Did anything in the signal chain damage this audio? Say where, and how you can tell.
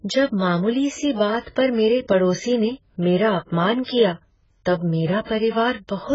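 Yes. The damage sits at the codec stage and runs through the whole speech clip. Nothing is present above 7.6 kHz, and what remains sounds dull and smeared, with a warbling, fizzy texture on sibilants and held vowels. That points to heavy damage from AAC compression, likely AAC-LC at a very low bitrate, around 12 kbps. Coarse frame-by-frame quantisation leaves holes in the spectrum and fills bands with noise. A plain low-pass or low sample rate would sound dull but would not warble.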